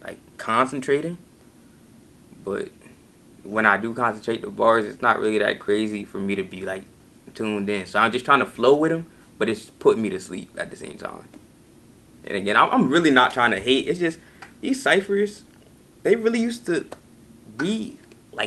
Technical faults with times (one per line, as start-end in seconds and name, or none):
10.91-10.95 short concealed packet loss